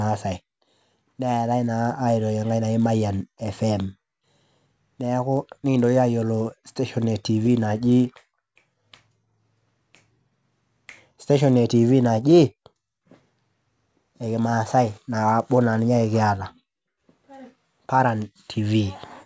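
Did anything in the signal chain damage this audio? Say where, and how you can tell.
Yes. The damage is in the sample-rate conversion stage, where the resampler restarted on every block. Throughout all the speech there is a buzz at 100 Hz that vanishes in pauses. It comes from small errors at each 10 ms block edge, where the converter lacked the neighbouring samples. The sound fits a conversion from 24 kHz to 16 kHz. A spectrogram would show thin vertical lines every 10 ms and a 100 Hz harmonic comb, present only under signal.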